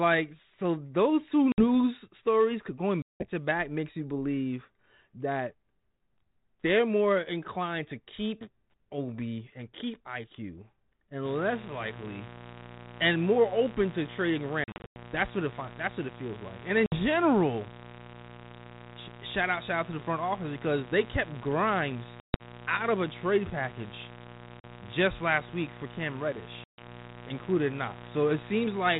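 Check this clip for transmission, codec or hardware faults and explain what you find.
Two faults are present: repeated packet loss on an ADPCM call and a mains buzz over the last 18 s.

Packet loss on an ADPCM call occurs seven times:
1.52–1.64 s (60 ms, between "so those two" and "stories going")
3.02–3.30 s (180 ms, between "stories going" and "to back makes you")
14.64–14.97 s (220 ms scattered over 320 ms, longest gap 100 ms)
16.86–16.97 s (60 ms)
22.20–22.42 s (180 ms over 200 ms, longest gap 140 ms)
24.60–24.64 s (40 ms)
26.64–26.81 s (140 ms)

Lost packets were filled with silence, and the decoder's adaptive predictor and step size lost sync with the sender's. Each hard-edged hole is followed by slightly distorted speech before it settles.

Mains buzz runs from 11.25 s to the end. Switching spikes on a 60 Hz supply inject a dense stack of harmonics. The result is a steady, raspy buzz about 15 dB below the speech, sitting under the 4 kHz band-limited sound of the 32 kbit/s G.726 link.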